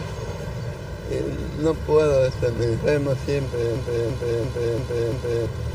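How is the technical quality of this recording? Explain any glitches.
The recording has one serious glitch, a system hang loop from 3.76 s to 5.46 s. While the system froze, the audio hardware kept replaying its ring buffer. A 341 ms slice repeats five times at about 2.9 Hz, a machine-gun stutter, which fits a 16384-sample buffer. About a second and a half of sound is lost. Unlike a dropout or underrun, the repeats are identical copies, not gaps.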